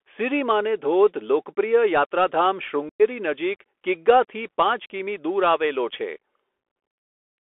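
From start to end, the speech passes through a Bluetooth CVSD headset codec, confined to 300 Hz to 3.4 kHz. Its granular hiss and scratchy sibilants set it apart from a clean telephone band filter.

From 2.89 to 3.02 s, between "ધોધ લોકપ્રિય યાત્રાધામ" and "નજીક કિગ્ગાથી પાંચ કિમી", unconcealed Bluetooth headset packet loss leaves an abrupt hole about 105 ms long. Concealment would have bridged it with smeared sound instead.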